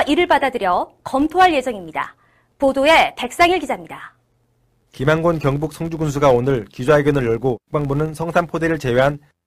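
A filter restarted on every block runs through the whole clip: the filter loses its memory at each block boundary and starts from silence, leaving a small transient every time. This produces an 86.1 Hz buzz under the speech, which fits a 512-sample block, growing louder with the speech level.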